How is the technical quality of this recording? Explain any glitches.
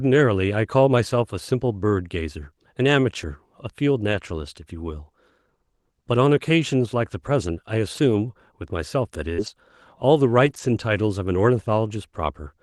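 The speech carries two kinds of packet-loss glitch over a call codec whose sound, with its top end ending near 12 kHz, fits Opus at around 32 kbps.

Lost packet rebuilt from error correction, at 3.21–3.23, 4.11–4.17, 7.93–7.99, 9.38–9.48 and 10.46–10.60 s: each lost packet was replayed from a low-bitrate copy carried in the next packet. Those 20 to 80 ms stretches sound briefly rougher and noisier, with no gap.

Burst of packet loss, at 9.33–9.40 s: the receiver extended the last sound for about 47 ms while fading it, so it holds or fades out. Then about 40 ms of speech is skipped, a real gap that the rebuilt frames don't leave.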